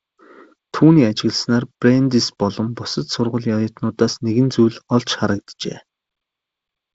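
Speech, with no technical faults to report.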